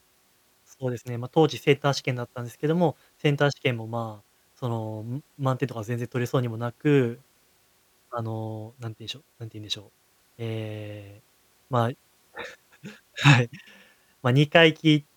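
Listening through the speech in this recording, nothing stood out as a technical problem.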